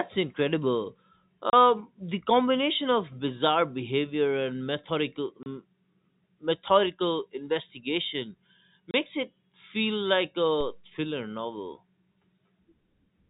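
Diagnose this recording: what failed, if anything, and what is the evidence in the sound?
The network dropped packets and the receiver inserted silence where each one should have been, with no concealment. The speech is cut by three clean holes of 30 ms each, at 1.50 s just before "the combination of bizarre", at 5.43 s, and at 8.91 s right after "methodical investigation". Each gap matches one lost packet, with abrupt cuts to and from silence at both edges.

At 10.61 s, just before "thriller novel", a DC step occurs. The signal's baseline suddenly shifts, as happens when a converter re-zeros or an offset input is switched into the path. The jump is heard as a single low thump while the speech continues undisturbed. The offset then drains away slowly, following a high-pass response of about 2 Hz, so there is no second thump. The G.711 telephone coding limits the band to below 4 kHz.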